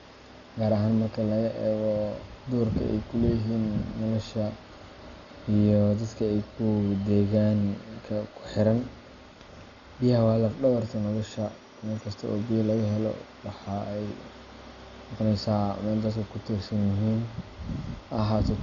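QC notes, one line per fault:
Throughout, Dolby Digital compression: the speech sounds dull and boxed-in, with nothing above about 6.9 kHz and a rough, fluttery hiss clinging to voiced sounds. The damage is heavy and fits a bitrate around 40 kbps, so this is likely an AC-3 style encode. At that rate the encoder trims the top of the band and leaves many frequency lines with no real detail, and the decoder patches them with noise, hence the grainy shimmer.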